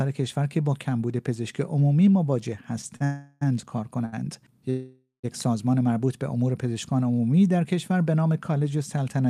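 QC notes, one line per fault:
2.96–3.02 s and 4.05–4.14 s, short stall from a late packet: the last sound is held for about 42 ms and then 71 ms until the packet arrives, and the audio resumes where it stopped with nothing lost. Each hold is far shorter than the freezes.
3.04–3.43 s and 4.70–5.26 s, call audio freeze: the audio stops moving forward and the last sound is drawn out as a fading continuation, for 368 ms and then 532 ms. The second one decays into about 130 ms of silence. The likely cause is packets held up in transit that drained the jitter buffer. In both, the audio then picks up from the same point, so a gap has been inserted with nothing missing. The length and the fade set these apart from the brief stalls.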